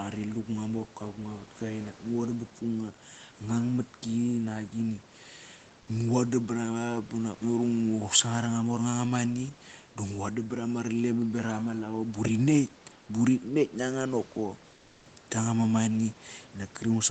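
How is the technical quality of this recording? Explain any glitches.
One glitch stands out in the speech, heard against a quiet room background and a call-style sound with nothing above 8 kHz.

From 14.75 to 15.05 s, the real background is replaced by steady, featureless noise about 2 dB quieter for 300 ms. This is comfort noise in place of the background, likely from Opus discontinuous transmission pausing the stream and the receiver synthesising filler noise.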